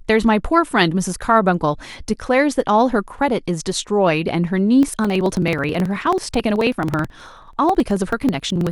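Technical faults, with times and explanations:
4.83 to 8.67 s, periodic USB or driver dropouts: A steady train of ticks runs through the speech, about 70 in all. They recur every 54 ms, roughly 18 a second. Each time, around 10 ms of audio is simply skipped rather than filled with silence. The waveform jumps straight across the gap, and that abrupt join is the tick you hear. A background task is likely stalling the USB bus or audio driver on a fixed cycle, which explains the even spacing.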